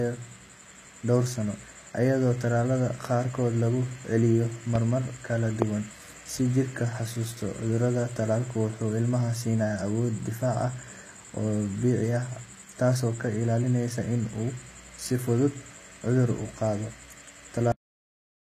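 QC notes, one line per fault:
Throughout: HE-AAC compression. The treble sounds synthetic: s sounds come out gritty and lisping, and the top end has a metallic sheen that doesn't sit naturally with the lower voice. Nothing reaches above 14.9 kHz. The likely cause is HE-AAC at a low rate, around 20 kbps, where only the lower band is truly coded. The highs are rebuilt by copying lower bands upward under a coarse envelope, so harmonics fail to line up across the join.
4.75 s and 5.62 s: loud pop. Two sharp, isolated pops land about 0.9 s apart, each about 20 ms long, while the speech carries straight on beneath them. The first stands roughly 10 dB above the signal and the second roughly 20 dB, so the second is clearly the harsher. They are likely voltage steps from a plug, switch or static discharge, which the following circuitry shaped into brief clicks.
17.72 s: cut-off end. The speech stops abruptly mid-sound and drops into dead digital silence for the remaining 0.85 s or so, with no decay or natural tail. 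That abrupt drop is what happens when the final buffers are never written or played out, leaving the recording truncated before the sound could finish.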